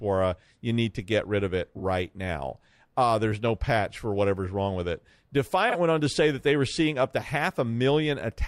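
Frames out of order: neighbouring blocks of coded audio reached the decoder in the wrong sequence and were played that way, so each short stretch has its two halves exchanged without any time being lost. At 1.76 to 1.82 s, after "get rid of it", two blocks of about 23.2 ms trade places. At 3.47 to 3.49 s, just before "patch for whatever's wrong", smaller blocks of about 8.7 ms swap. At 5.69 to 5.76 s, ahead of "went on to say", 23.2 ms blocks swap again. Each sounds like a brief garbled flutter.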